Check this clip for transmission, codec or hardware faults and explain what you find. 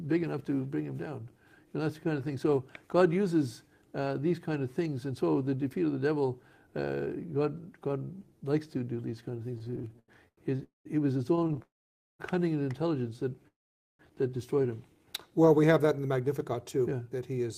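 Yes, there are network-delivery faults concentrated in the second half: two bursts of stuttering, three freezes, and a closing stretch played fast.

Repeated stalls (stutter) occur from 9.55 to 10.63 s and again from 11.35 to 11.62 s. Packets reached the receiver later or more slowly than playback consumed them, so the jitter buffer kept running dry. The first burst has 15 gaps bridged with 340 ms of continued sound, the longest 91 ms and about 31% of that span. The second has 7 short gaps totalling 92 ms. Nothing is lost, but the audio drags and judders.

Call audio freezes follow at 10.63 to 10.87 s, 11.62 to 12.21 s, and 13.48 to 14.01 s, lasting 219 ms, 569 ms and 512 ms. Each sounds like a brief continuation of the last sound fading into silence, with 150 ms, 510 ms and 480 ms of quiet respectively, before the audio resumes exactly where it halted. The likely cause is packets held up in transit that emptied the buffer. 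Each freeze inserts its full length as added delay.

Jitter buffer speed-up runs from 15.84 to 17.45 s. Holding more audio than it aims for, the receiver trims it back by repeatedly cutting out pitch-period-sized slices, around 150 ms in total. Pitch stays put, but playback runs at 108% speed, so this stretch sounds noticeably hurried.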